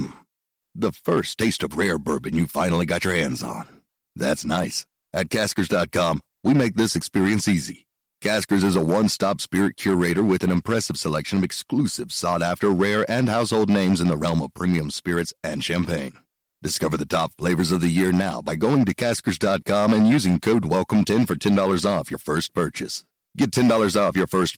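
Hard clipping runs throughout the speech: a signal about 8 dB too hot for the chain has its peaks sliced flat on a few percent of samples, leaving harsh crackle on louder syllables.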